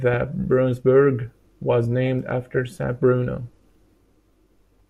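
No technical faults are audible.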